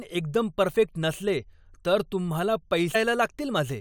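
At 2.94 s, just after "परफेक्ट नसले तर तुम्हाला", there is damaged data in the compressed stream. Corrupted bytes leave the decoder misreading a frame and hunting for the next valid header, so the speech breaks into a brief glitch lasting under 20 ms.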